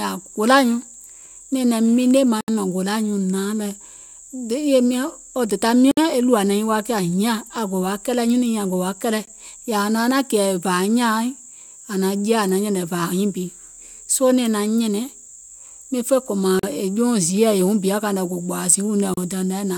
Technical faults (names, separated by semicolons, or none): block of digital silence